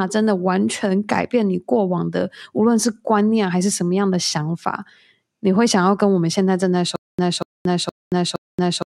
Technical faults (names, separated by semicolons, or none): stutter with silent gaps